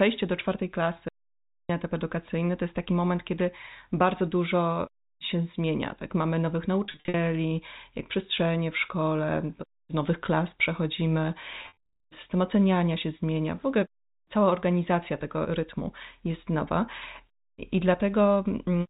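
An audio dropout to silence runs from 1.09 s to 1.69 s, removing about 0.61 s of speech. The sound stops abruptly and comes back just as suddenly. The gap between is silent, with no room tone or hiss. That flat silence means the input was likely lost, through a disconnected source, a broken link or a mute, while recording carried on writing empty samples.

Packet loss with pitch repetition appears at 6.84 to 7.14 s and again at 11.62 to 11.75 s. In the first event, 200 ms of audio goes missing, scattered over 300 ms. In the second, 260 ms is lost across 420 ms. In both, the longest single gap is 50 ms, and the lost time works out to packets of roughly 10 ms. The receiver fills each hole by repeating the last pitch cycle, so the speech briefly turns held and buzzy before it resumes. The phone-band G.711 A-law coding at 64 kbps caps everything at 4 kHz.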